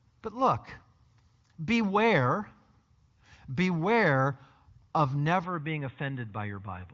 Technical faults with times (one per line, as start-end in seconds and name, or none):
5.44-6.93 input switched to a poorer device